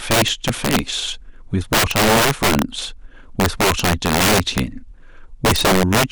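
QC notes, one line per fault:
Throughout, integer overflow: violent, sharp cracks burst out of the louder speech, far harsher than clipping. The signal is driven about 12 dB past full scale, and roughly one sample in twenty wraps to the opposite extreme instead of being limited.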